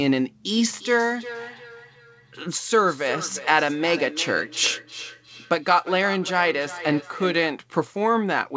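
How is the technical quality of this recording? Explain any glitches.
Quality suffers from one fault. Feedback echo between two devices spans 0.56 to 7.6 s: a nearby device replays the call into the microphone, so the speech returns roughly every 400 ms, thinner and ringing, at its loudest about 14 dB below the speech, all within the call codec's 8 kHz bandwidth.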